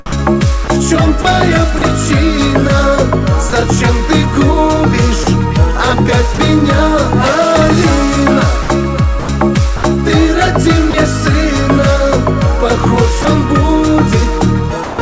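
From 0.06 to 1.82 s the sound is chopped by the voice detector, with about 150 ms in total swapped for comfort noise. The likely cause is the sender's detector toggling repeatedly, so the sound is cut more than once rather than giving way once. Brief drops by the voice detector follow at 3.50–3.53, 5.24–5.27 and 6.35–6.38 s, each a single 30 ms gap filled with comfort noise before the sound returns. A second chopped stretch from 8.63 to 9.83 s loses about 210 ms across more than one switch. Further drops come at 10.91–10.94 and 13.22–13.25 s, each 30 ms, and then 14.84–14.99 s, lasting 150 ms. Each drop is one clean hand-over to comfort noise, likely the detector mistaking quiet sound for background, unlike the choppy alternation. The comfort noise, like the rest of the audio through the G.722 call path, has nothing above 8 kHz.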